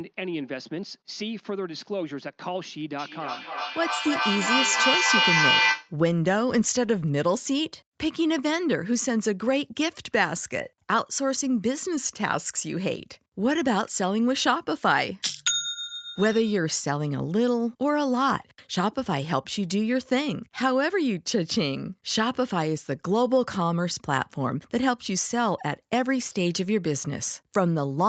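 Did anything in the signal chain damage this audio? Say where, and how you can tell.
Yes. From 2.99 to 5.98 s there is feedback echo between two devices, an acoustic loop outside the canceller's reach. The speech returns roughly every 300 ms, thinner and ringing, and the repeats build to about 2 dB above the direct speech instead of decaying.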